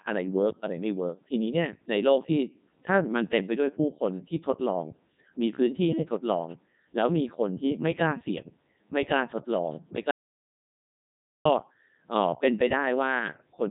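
From start to finish the speech has passed through the Codec 2 vocoder, which keeps only pitch, voicing, energy and a rough spectral envelope and then rebuilds the voice from sine waves. The result is robotic and buzzy, with nothing above 3.8 kHz, heavy damage consistent with Codec 2's 3.2 kbit/s mode.

At 10.11 s the input was likely lost and silence was written in its place: an audio dropout to silence lasting about 1.34 s, to 11.45 s. The speech cuts out abruptly into dead silence with no room tone, then resumes mid-flow.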